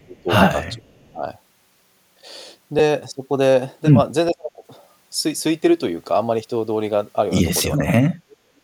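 The speech is pulled down sharply from 0.0 to 0.29 s and again from 0.74 to 1.24 s, by about 20 and about 25 dB, with the level cut in patches. At 2.79 s a brief rough smear replaces the sound, consistent with a single lost LE Audio frame of 7.5 ms that the LC3 decoder filled by reusing the previous spectrum with randomised phase. Further dips of about 35 dB follow at 4.31 to 4.63 s and 7.77 to 8.55 s, where the voice thins and drops out in pieces. All four match speech suppressed in double talk, likely from an echo canceller attenuating the near-end talker while the far end was active. From 5.37 to 5.40 s a longer noisy smear lasting 22.5 ms, which fits three lost frames, replaces the tonal detail of the voice before it recovers.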